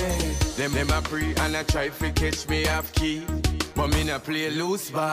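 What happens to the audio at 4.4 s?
Nothing goes wrong at 4.4 s; the audio there plays through intact, with no dropout, click, distortion or other fault at that moment.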